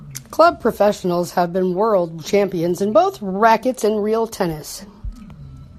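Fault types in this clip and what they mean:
No technical faults can be heard in this speech recording; the signal stays steady and continuous throughout.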